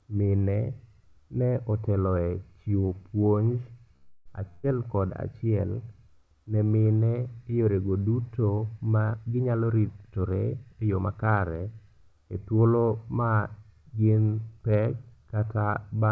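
Right after "otelo e chiwo puonj", from 3.96 to 4.33 s, the last sound stretches out and fades before the speech picks up where it stopped. This is a call audio freeze, likely from delayed packets draining the jitter buffer, adding about 0.3 s.

From 4.49 to 4.65 s, just before "kod achiel", the last sound is held and fades in place of the speech, which then jumps ahead. This burst of packet loss removed about 140 ms of audio.

After "mine yorego duto ma", from 9.05 to 11.35 s, the speech sounds hurried at unchanged pitch, running at 113% speed. This is a jitter buffer speed-up, trimming pitch-period slices, about a third of a second in all, to shrink the backlog.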